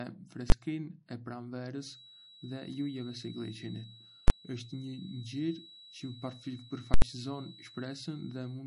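Throughout the clip, MP3 compression is plainly audible. The speech has a watery, swirling quality, and nothing survives above 10.6 kHz. This is likely the work of an MP3 encoder short of bits, which fits a low bitrate around 40 kbps. Starved of data, the encoder drops weaker frequency lines that then flicker in and out from frame to frame, and it removes the treble above a fixed cut-off.

At 0.50 to 0.52 s comes the first invalid numbers at full scale fault. A 20 ms block of invalid or infinite values was forced to one extreme of the output range. The waveform is held flat there, far beyond the speech's own level, and because the block is so brief it lands as a single loud bang.

From 1.76 s to the end, a feedback whistle sits at a single pitch of 3.9 kHz, around 15 dB below the speech. It is heard as a thin tone running behind the voice, slowly swelling and fading in level. Its cause is a loudspeaker-to-microphone loop that is likely sitting right at the threshold of feedback, so that frequency keeps ringing without growing into a full howl.

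Invalid numbers return at 4.28 to 4.30 s, again as a 20 ms block pinned to an extreme value and heard as one bang. At 6.94 to 7.02 s the block lasts 80 ms. That is long enough to hear a loud pop where it begins and another where it ends, with no sound between them, because the output is held flat at one extreme for the whole stretch.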